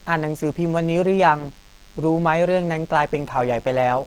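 A thin, steady buzz runs under the speech from start to finish, faint and well below the talker. Its 100 Hz fundamental with a dense stack of harmonics is the signature of DECT cordless phone buzz: a nearby handset or base station sends a radio burst every 10 ms, and the audio circuitry rectifies it.

Throughout, the speech also sounds muffled and hoarse, with a grainy, roughened texture. Although content extends up to about 20.3 kHz, the damage is plainly audible, likely from Opus compression running in its hybrid speech mode at a low bitrate, something near 16 kbps.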